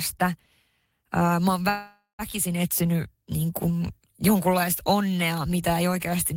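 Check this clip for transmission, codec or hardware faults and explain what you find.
There is one fault, a call audio freeze, from 1.69 to 2.22 s. The speech stalls as its last sound is drawn out into a fading buzz or hiss, which dies to silence for about 140 ms. The speech then resumes exactly where it stopped, nothing skipped, but now running about 495 ms late. The likely cause is packets delayed in transit, letting the jitter buffer run dry so the receiver filled the wait.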